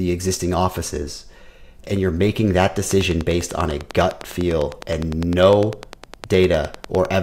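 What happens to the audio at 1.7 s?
Nothing goes wrong at 1.7 s; the audio plays through that moment intact, with no dropout, click, distortion or other fault.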